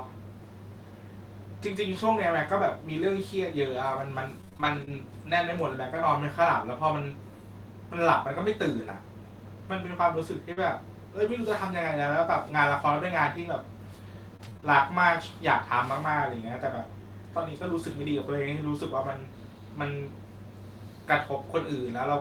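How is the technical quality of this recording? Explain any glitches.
The recording has several network glitches: packets were lost in transit at five points in this speech, and the receiver covered each loss in different ways.

Lost packet rebuilt from error correction, at 1.63–1.69 s, 10.57 s and 18.03–18.05 s: packets went missing, but each following packet carried a low-bitrate backup copy, which the decoder played instead. No gap results. The rebuilt 40 ms at 1.63 s and 20 ms at the others sound briefly rougher and grainier.

Repeated packet loss (robotic sound), at 4.41–4.99 s and 14.37–14.67 s: packets kept dropping, with six holes in the first stretch and five in the second, each up to about 25 ms. The decoder extended the preceding sound into each hole, and about a third of the later span is filled this way. The result is choppy, with pieces missing.

Short concealed packet loss, at 10.53–10.59 s: 40 ms of audio arrived too late, so the receiver continued the last sound and then blended back into real audio. 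Its final stretch overlaps the error-correction rebuild at 10.57 s, and together they cause a brief smear.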